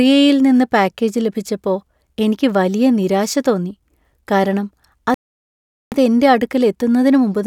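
At 5.14 s the speech just cuts out and stays silent until 5.92 s, a gap of about 776 ms, before carrying on. That's a playback stall: the player likely ran dry of data or had its thread held up, so output simply stopped mid-flow.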